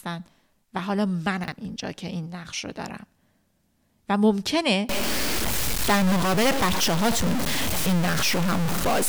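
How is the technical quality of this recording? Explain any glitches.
The recording has two kinds of fault: brief scrambled moments in the speech, and a distortion that takes over the second half.

Chunks out of order, from 1.44 to 1.52 s and again from 7.68 to 7.76 s. In each, a 40 ms block of audio was delivered one block late, so it plays after the block meant to follow it. Nothing is missing, but the pair is swapped, leaving hard joins where the waveform jumps. Each spot is a short jumbled stutter in the speech.

From 4.89 s to the end, the sound turns distorted, and the gaps between phrases fill with a steady hiss-like noise instead of falling quiet. The likely cause is a stuck bit: one bit in each sample held permanently at 0 or 1, perhaps by a faulty data line or converter. Roughly half the samples come out wrong by that bit's fixed amount, which adds the gritty distortion. Near-silent samples also flip this error with their sign, so pauses turn noisy.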